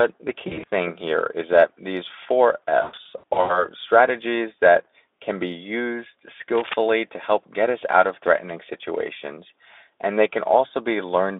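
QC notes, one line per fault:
0.47–0.68 s and 2.81–3.66 s, VoIP packet loss concealed by the speech codec: Packets went missing in scattered bursts. About 120 ms were lost over 200 ms before "here is that these", with runs up to 40 ms. About 400 ms were lost over 680 ms between "is that these four" and "strategies that can be", with runs up to 120 ms. The Speex decoder, working in a 250 Hz to 3.6 kHz telephone band, filled each gap by repeating its last pitch and filter at falling gain. That leaves buzzy, smeared, fading stretches, and the sound stays weak for a moment after packets resume.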